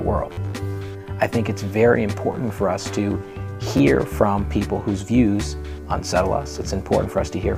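A short buzzy stutter at 0.33 to 0.37 s, a single click at 2.32 s and a brief double tick at 3.77 to 3.80 s all come from a repeated buffer. Each time, fresh audio failed to reach the output in time, so the same slice of about 11.6 ms, which fits a 512-sample buffer, played again with a hard join: four extra times in the first event, once in the second and twice in the third. Roughly 50, 10 and 20 ms of real audio were lost.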